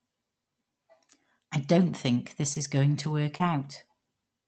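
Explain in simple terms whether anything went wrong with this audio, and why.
Lost packet rebuilt from error correction happens seven times, each lasting about 20 ms, starting at 2.47, 2.55, 2.59, 3.03, 3.40, 3.48 and 3.64 s. A small chunk of the call's data went missing, but the next chunk carried a rough backup copy of it. The receiver played that backup, so the speech never drops out. Those moments just sound briefly grainier and noisier than the speech around them.

Short concealed packet loss occurs twice, from 2.53 to 2.57 s and from 3.37 to 3.42 s. Each time, about 20 ms of speech arrived too late to use. With no backup available, the receiver invented a stand-in by stretching the last sound it had, then faded back into the real speech. You hear this as a quick smear or wobble, and a short sound in that spot may go missing.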